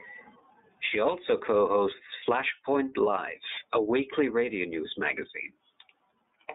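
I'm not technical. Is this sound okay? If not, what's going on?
No. From start to finish the speech sounds thin, slightly rough and robotic, because of the iLBC codec, a phone-call compressor that drops high tones and rebuilds speech in 30 ms chunks.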